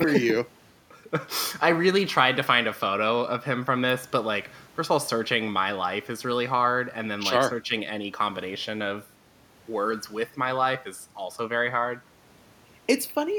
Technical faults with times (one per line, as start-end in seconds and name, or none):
none